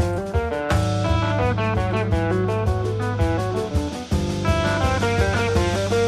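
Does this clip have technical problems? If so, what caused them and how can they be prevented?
No, nothing technical stands out here, so there's nothing to trace back or guard against this time.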